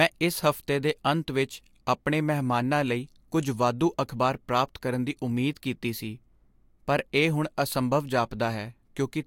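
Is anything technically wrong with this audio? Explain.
No, nothing technically wrong turns up here; it's just a speech recording with no faults to point to.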